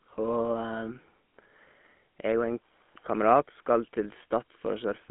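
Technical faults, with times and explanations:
throughout, GSM full-rate codec: speech rebuilt from a vocal-tract model driven by sparse pulses sounds plainly buzzy and gravelly, band-limited to 200 Hz–3.5 kHz, nothing above 3.7 kHz.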